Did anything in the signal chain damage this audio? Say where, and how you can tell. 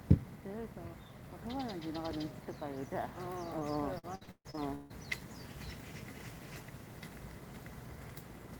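Yes. At the network stage, a short concealed packet loss appears at 3.59 to 3.63 s. About 20 ms of audio never arrived, and the decoder extended the preceding sound for roughly 13 ms before blending back in. That produces a brief smear or wobble.

Repeated packet loss (robotic sound) follows from 3.99 to 4.92 s, also a network fault. Seven separate gaps, the longest 149 ms, leave about half of that stretch concealed. Each patch continues the last sound just before the next hole, giving a choppy texture with missing pieces.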